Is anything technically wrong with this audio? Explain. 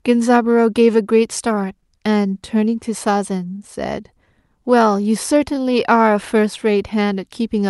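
Yes. There is clock drift between sender and receiver: the sending device's clock runs about 1% slow, so the receiver's jitter buffer keeps running short of audio. Throughout the clip this makes the timing feel faintly uneven, with small hiccups at irregular intervals.

The receiver responds with repeated timing corrections from 0.45 s to 7.13 s, stretching the audio to play at about 99% speed by repeating short pieces. Together they add roughly 70 ms. The result is a slightly dragging, unsteady tempo and occasional tiny stutters.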